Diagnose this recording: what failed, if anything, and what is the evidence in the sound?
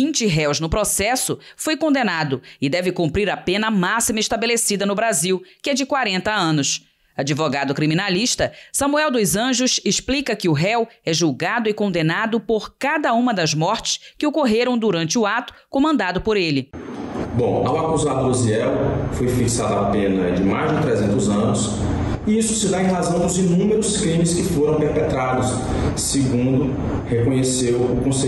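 Nothing in the signal points to a failure at any stage of the chain: level, continuity and timing hold steady across the whole recording, with no dropouts, distortion or interference audible anywhere.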